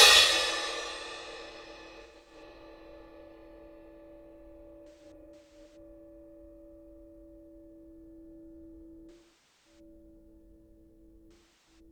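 AAC frame loss with concealment occurs at 2.02 to 2.54 s, 4.87 to 5.76 s, 9.10 to 9.79 s and 11.32 to 11.79 s. Missing frames are rebuilt from the last good spectrum, leaving smeared, noisy, phasey patches, with gaps of roughly 150 ms at most in the first two.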